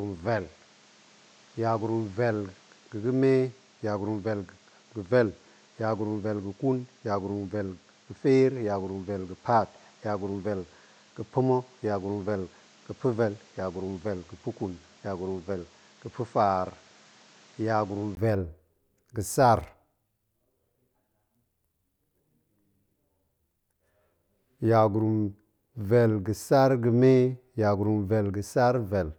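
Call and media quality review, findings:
Dull, band-limited speech 0.0 to 18.17 s, then brief 20 ms gap and fuller sound. Likely input switched to a poorer device: nothing above 8.3 kHz, roughly 5 dB quieter, added noise floor about 30 dB down. Spectrogram: hard ceiling, lifting after 18.17 s.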